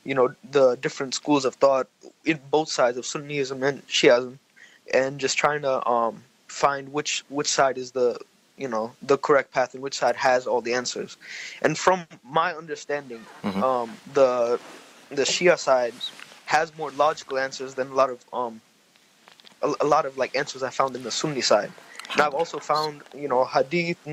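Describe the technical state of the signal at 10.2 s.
At 10.2 s the signal is intact, with no audible dropout, distortion, glitch or other technical fault at that point.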